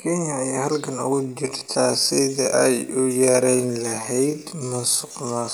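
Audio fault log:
1.11–5.53 s, time-stretched section: Right after "ayaa halgan" the speech abruptly slows to 0.585 times its pace and stays slow to the end. Pitch does not drop. It drags, likely from software repeating short pieces to lengthen it.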